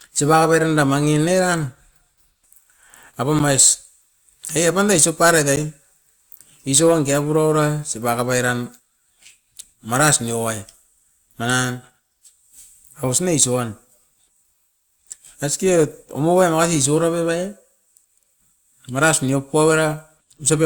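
Speech, with two blocks of digital silence at 3.39 s and 5.56 s. Each 10 ms dropout cuts abruptly to silence and back, leaving a tick. An unfilled output buffer is the usual cause.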